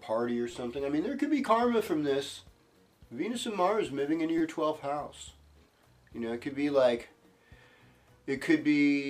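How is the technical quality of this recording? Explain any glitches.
Three repeated-buffer glitches mar the recording, at 0.52 s, 1.87 s and 4.38 to 4.41 s. Each time, fresh audio failed to reach the output in time, so the device replayed its last block, about 5.8 ms long (consistent with a 256-sample buffer), three, one and four extra times. The hard joins produce a brief buzzy click rather than an audible stutter. Unlike a dropout, there is no silent gap: the same fragment loops, then the sound resumes.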